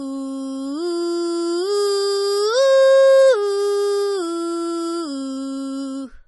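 Music carrying heavy MP3 compression throughout, with nothing above about 11.5 kHz. The treble is cut off flat, and weak spectral detail flickers between frames, giving a watery, swirly texture, chirpy metallic highs and smeared attacks. This likely points to a low bitrate of around 32 kbps.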